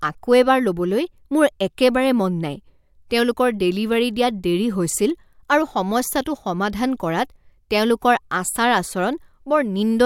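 The speech recording contains no technical faults to describe.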